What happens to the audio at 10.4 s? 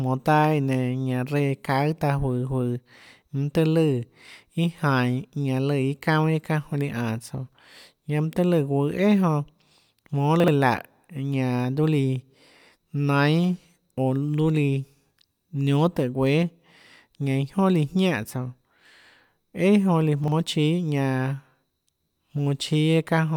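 From 10.4 to 10.48 s the speech has chunks out of order: a 40 ms chunk arrives one chunk late and plays after its successor. Nothing is lost, but the swapped pair leaves three hard joins, heard as a brief garbled stutter.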